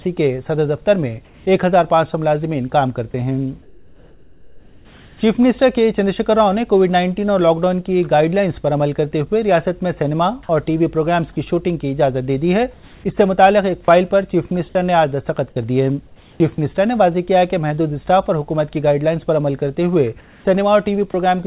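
At 1.25 to 1.46 s, 3.62 to 5.21 s, 12.74 to 13.04 s, 16.07 to 16.4 s and 20.21 to 20.45 s, the quiet background, about 30 dB below the loud parts, turns into a steady, featureless hiss within about 1 dB of the original level. This is likely comfort noise in place of the background, synthesised by the receiver while the sender paused transmission.

At 21.11 to 21.14 s, about 20 ms of sound vanishes into the same flat noise before the audio resumes. This is likely sound dropped by the voice detector, which mistook that brief stretch for background and stopped sending. Throughout, nothing reaches above 4 kHz, which fits a narrowband G.711 call path.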